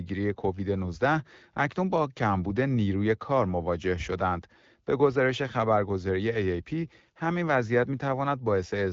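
Nothing here counts as a fault: the speech comes over an AMR wideband (HD Voice) link at 12.65 kbit/s, so the band stops around 7.5 kHz, which is just what that codec does.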